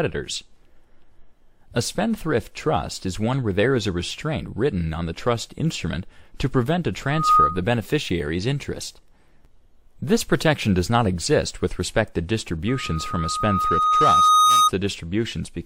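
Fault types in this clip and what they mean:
Loudspeaker feedback squeal: the mic is hearing its own speaker, and at 1.2 kHz the loop gain tops one, so that tone feeds itself. It swells in a fraction of a second around 7.05 s, then creeps up over about two seconds from 12.68 s, roughly 10 dB above the sound.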